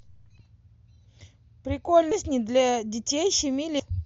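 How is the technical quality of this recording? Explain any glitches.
The speech is marred by three short skips where chunks of audio vanish, heard as compressed frames skipped. At 0.39 s about 300 ms goes missing, at 2.11 to 2.14 s about 400 ms, and at 3.79 s about 200 ms. Whole blocks of encoded audio never reach the output, consistent with 20 ms frames being lost or rejected as damaged. The sound leaps forward at each join. Unlike a dropout, there is no silent gap.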